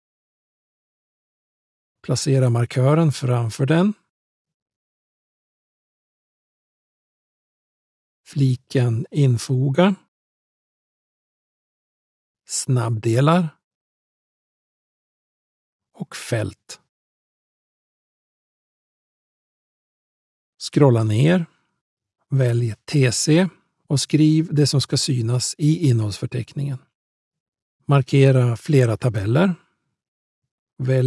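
Nothing stood out on listening; no technical faults could be heard anywhere in the recording.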